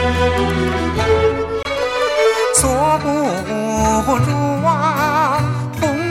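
A Bluetooth dropout at 1.63 to 1.67 s cuts the sound to silence, likely from a late wireless packet, fitting one lost frame, before resuming further along.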